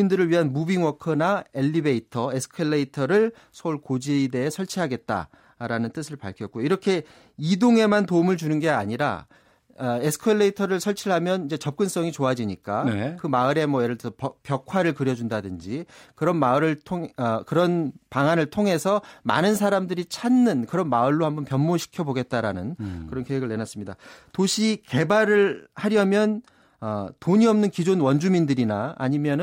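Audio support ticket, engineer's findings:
No technical faults found in the speech signal on review, so nothing to attribute to any component in the chain.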